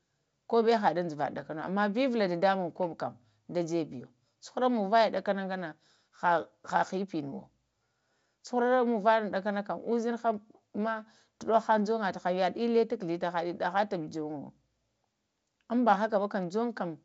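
Nothing stood out on listening to this speech, which sits within the band of G.722 wideband telephone coding at 64 kbit/s, with no content above about 7.7 kHz.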